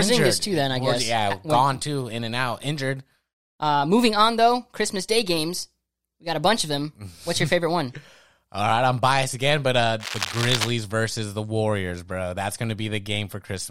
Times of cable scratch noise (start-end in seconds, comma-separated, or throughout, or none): 9.99-10.70